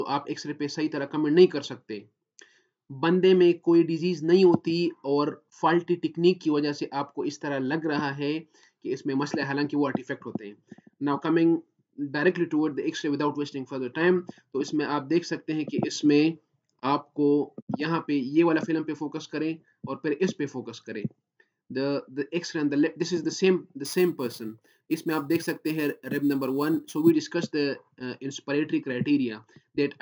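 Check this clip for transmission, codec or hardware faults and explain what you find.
One fault is present. Imaging from sample-and-hold upsampling occurs from 23.85 to 27.11 s. The rate was raised by holding each sample with no smoothing filter. This fits a 16 kHz source rate. Mirrored spectrum copies appear from 8 kHz to 16 kHz at about 23 dB below the signal. They are heard as a metallic fizz whose level tracks the sound.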